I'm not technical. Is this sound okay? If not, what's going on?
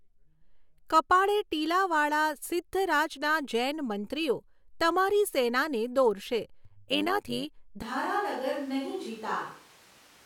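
No. Right after "જૈનમંત્રીઓ તમારી સેનાને દોરશે", from 6.65 to 7.45 s, the speech takes on a fast, buzzy flutter, like a robotic tremolo. This is overlap-add ripple. The audio was processed in short overlapping chunks that were joined back unevenly, so the loudness pulses about a hundred times a second.

From 7.83 s to the end, the speech suddenly sounds roomy and hollow, thinner in the bass, with more background noise, though about as loud as before. This is a switch to a distant microphone, likely because the close microphone dropped out and a farther one took over.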